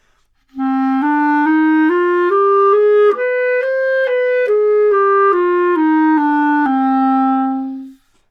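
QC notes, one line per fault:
Nothing stood out on listening to this audio.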